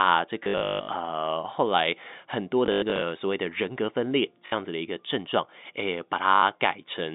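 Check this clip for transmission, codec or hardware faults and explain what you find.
Four bursts of dropped packets break up the speech, heard over a narrowband G.711 telephone line. Packet loss with last packet repeated occurs at 0.44–0.88 s, 2.66–3.02 s, 4.46–4.52 s and 6.36–6.42 s. The receiver replays the previous packet, which fits 20 ms packets, so each burst gives a buzzing robotic stutter at about 50 Hz, with runs up to 160 ms, rather than silent gaps or smooth fades.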